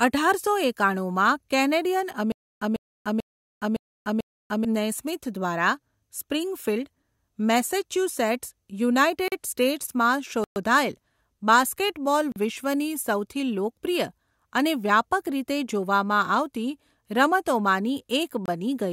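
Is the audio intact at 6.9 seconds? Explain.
Yes, the audio is intact at 6.9 seconds, with no dropout, click, distortion or other fault at that point.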